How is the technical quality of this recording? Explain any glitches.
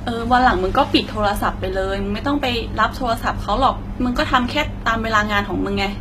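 The technical quality is noticeably degraded throughout the speech. Treble s sounds turn gritty and lispy, likely from HE-AAC compression at a low bitrate around 20 kbps. Copied lower bands replace the real treble. A spectrogram shows repeated, smeared upper bands and nothing above 14.9 kHz.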